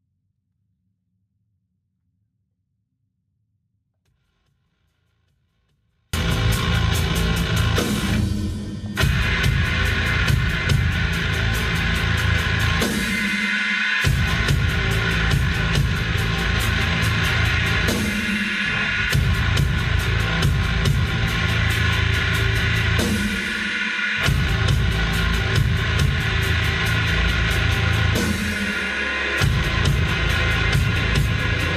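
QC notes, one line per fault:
0.0–6.13 s, 24-bit alignment error (too quiet): the audio is clean but about 48 dB too low, almost inaudible, then jumps to normal level at once at 6.13 s. Samples held in the low 24 bits of 32-bit words were read as full 32-bit integers.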